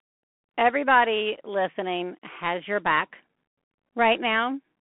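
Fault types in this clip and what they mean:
Bluetooth CVSD headset codec: The speech sounds thin and boxed-in, with a scratchy, granular edge and plainly audible codec damage throughout. The band runs from roughly 200 Hz to 3.4 kHz, with nothing above 3.8 kHz. CVSD sends one bit per sample to nudge the waveform up or down with an adapting step, which fits a 64 kbps stream. Fast, loud high content outruns that step, roughening sibilants and leaving a grainy hiss beneath the speech.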